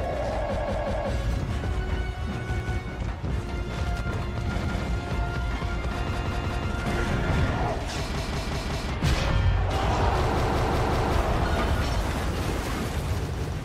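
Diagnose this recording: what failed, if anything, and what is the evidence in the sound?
Repeated buffer at 0.56–1.12, 2.60–2.79, 4.64–4.83, 6.13–6.69, 8.17–8.92, 10.40–11.15 and 13.38–13.56 s. The driver or buffer stage ran dry and replayed the same 186 ms block, which fits an 8192-sample buffer, one to four extra times with hard joins, causing stutters without skipping audio.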